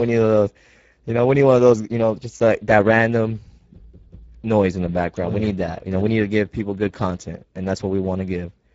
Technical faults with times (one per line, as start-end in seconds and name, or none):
0.00-8.74 Speex codec